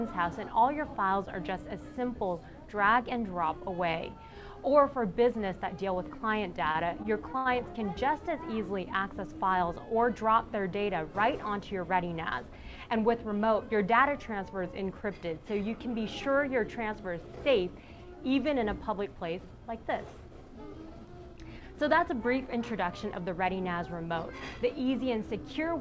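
Between 6.72 and 7.47 s, late-arriving packets let the jitter buffer run empty four times, producing repeated stalls (stutter). The receiver stretched the preceding sound across about 133 ms in total, longest gap 76 ms, so the audio drags and hiccups while nothing drops out, over a band ending at 8 kHz from G.722 coding.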